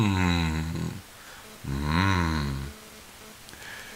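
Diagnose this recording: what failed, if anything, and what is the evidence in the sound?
The analogue wiring picked up GSM phone buzz from 1.44 s to 3.95 s. A hard, raspy 217 Hz buzz with many harmonics sits about 22 dB below the sound and stutters on and off. A nearby phone transferring data in bursts was rectified by the audio circuit.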